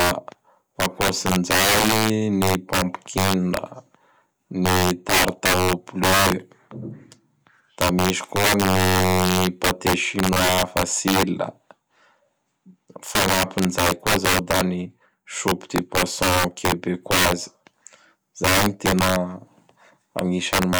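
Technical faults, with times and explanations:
Throughout, integer overflow: violent cracks on loud speech peaks, as gain about 9 dB too high wraps a few percent of samples to the opposite extreme.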